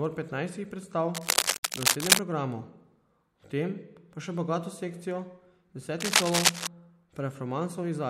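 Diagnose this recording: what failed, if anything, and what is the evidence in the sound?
Analogue wiring: cable scratch noise from 1.14 to 2.21 s and again from 6.00 to 6.67 s, dense, uneven bursts of rustling sitting a few dB above the speech. The likely cause is a worn connector or cable being moved, rapidly varying contact resistance. Unlike digital damage, it lasts and wavers.

Codec or storage: damaged data in a compressed stream at 1.53 to 1.63 s, a brief chirp or blip, falling inside the first scratch burst. The decoder misread corrupted frames and resynchronised. It is distinguished by its abrupt, clipped character.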